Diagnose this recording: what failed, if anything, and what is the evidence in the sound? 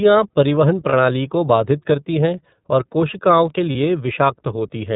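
The codec stage is at fault: the speech is band-limited to 4 kHz with a rough, slightly synthetic texture throughout, the mark of the iLBC codec. Unlike a plain low-pass, the grain comes from coarse excitation coding, which fits the 13.33 kbps, 30 ms-frame mode.

Network loss caused lost iLBC frames at 0.89 to 0.94 s, just before "को बाधित करती हैं", and at 3.72 to 3.76 s, just after "हैं और कोशिकाओं के". Each gap is a brief buzzy held vowel, fitting one lost 30 ms frame, with clean recovery immediately after.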